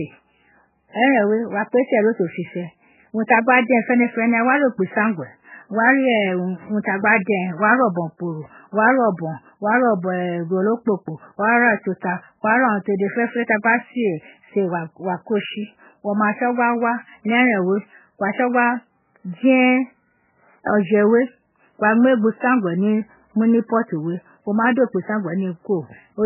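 From start to finish, the speech carries heavy damage that most likely comes from MP3 compression. Nothing reaches above 3 kHz, so the top end sounds cut off and dull. The sound is watery and swirling. Weak frequency components flicker on and off between frames. Sibilants turn into metallic chirps, and the onsets of sounds smear. The damage is severe enough to point to a very low bitrate, around 8 kbps.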